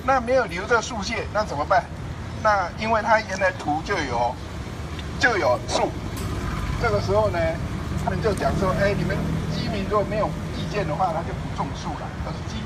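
At 2.78 s a brief, quiet burst of energy at the wrong frequencies sounds, peaking around -35 dBFS: a corrupt frame decoded, with roughly four damaged frames played despite flipped bits. From 8.04 to 8.10 s the audio jumps ahead by about a tenth of a second, where compressed frames were skipped and never played.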